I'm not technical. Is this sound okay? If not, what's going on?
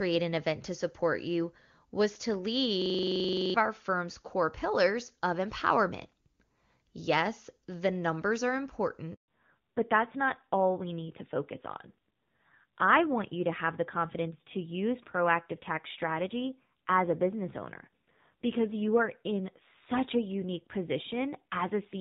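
No. From 2.82 to 3.54 s there is a system hang loop: the computer or its sound driver froze while the sound hardware kept replaying the same 43 ms scrap of audio, 17 times at about 23 repeats per second. You hear a buzzing stutter, and nearly three-quarters of a second of real sound is lost.

At 9.14 s there is a handover gap: the phone switched the call to a different network, and nothing arrived during the switch. The sound cuts out for 140 ms, until 9.28 s, and whatever was said in that moment is gone.

Right after, from 9.28 s to the end, comes a fallback to narrowband. The call dropped from the HD Voice (AMR wideband) link heard at the start to an older phone codec. Everything above 4 kHz disappears, so the voice turns duller, rougher and more muffled.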